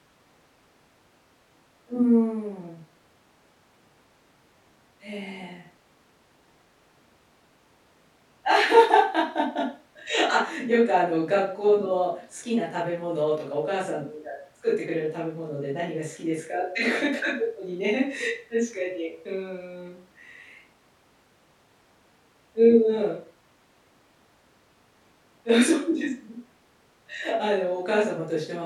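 A speech recording with no technical faults to report. Nothing in the audio points to a problem at any moment.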